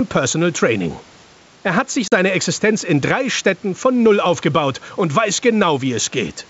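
Throughout, gain pumping of roughly 5 dB, likely from an overdriven input feeding a fast limiter, pulls the level down on every loud sound. The waveform envelope looks flattened.

From 2.08 to 2.13 s, packet loss on the ADPCM call leaves a 40 ms silent gap, about two packets' worth. The spectrogram shows a sharp-edged blank column, then speech that returns slightly distorted as the decoder resynchronises.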